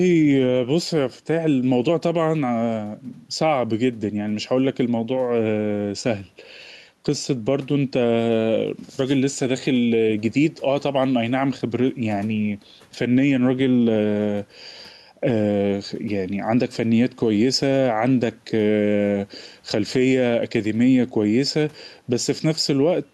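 Gain pumping throughout: input gain, likely set too high, keeps a fast limiter clamping, so room noise swells in pauses and ducks around 5 dB under speech.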